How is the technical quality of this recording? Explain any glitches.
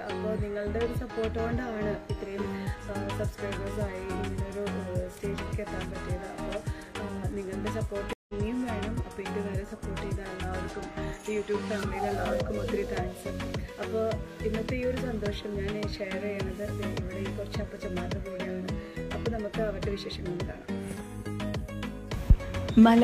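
The recording has one clear glitch, a stream reconnect from 8.13 to 8.34 s. The connection dropped, and the player restarted its decoder mid-stream. That leaves 157 ms of silence. The sound then resumes around 150 ms further along, so a brief stretch is skipped. On a waveform this appears as a flat gap. A spectrogram shows a blank vertical band with mismatched content on either side.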